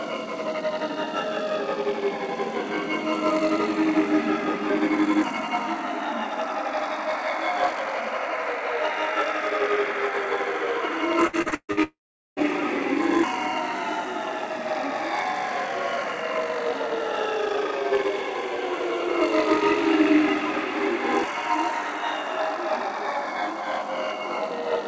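A recording of everyday sounds, carried over a call path whose spectrum stops cleanly at 8 kHz (consistent with a G.722 wideband codec), breaks up between 11.27 and 11.80 s with repeated packet loss (robotic sound). Five separate holes open in quick succession, the longest about 140 ms, and roughly 60 percent of that span is patched by extending the preceding audio. The result is choppy. On a spectrogram this shows as short blocks of frozen, horizontally smeared harmonics alternating with real content. The waveform looks like repeating periodic segments with abrupt joins. Immediately after, from 11.83 to 12.40 s, the sound is briefly continued as a fading buzz or hiss and then collapses into about 420 ms of silence, with roughly half a second of material never returning. This is most likely a long network dropout. It appears as a decaying smear that gives way to an empty, flat band on the spectrogram and a flatlined waveform before normal audio resumes at 12.40 s.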